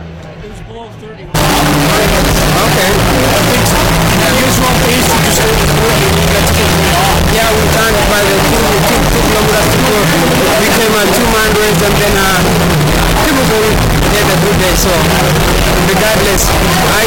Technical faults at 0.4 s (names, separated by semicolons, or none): none